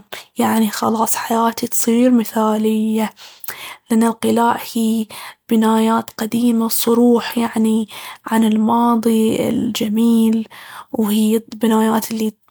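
Nothing technically wrong turns up anywhere in this short speech recording, so there's no fault to point at or explain.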